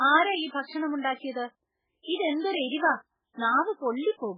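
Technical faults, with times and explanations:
Throughout: MP3 compression. Nothing is heard above about 4.9 kHz. The sound is heavily damaged, watery and swirly, with smeared attacks. This is likely an MP3 encode starved of bits, which fits a very low bitrate near 8 kbps. The encoder cut the treble and dropped weak frequency lines.
1.32 to 1.35 s: pre-echo. A short hiss of about 39 ms comes before a sharp attack, which sounds soft and smeared. The codec spread its noise across the whole block. The noise sized for the loud attack filled the quiet moment before it.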